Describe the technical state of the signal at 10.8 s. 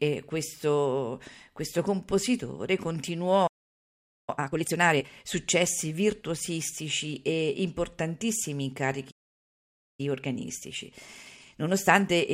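At 10.8 s you're inside a stretch of time-compressed catch-up that kicks in at 10.0 s, right after "successi virtuosistici e importantissimi", and runs to the end of the clip at 12.3 s. The player is working off a backlog by snipping out tiny slices of the speech and cross-fading across the gaps, so it plays about 1.1 times as fast. Pitch stays put, but the delivery sounds hurried.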